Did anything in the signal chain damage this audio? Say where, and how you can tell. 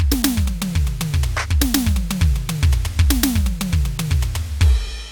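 No, nothing in the chain audibly damaged this music.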